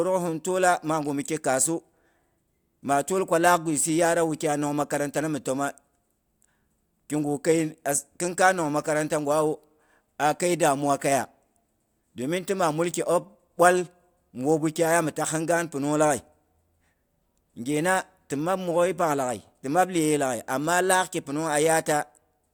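No technical faults are audible.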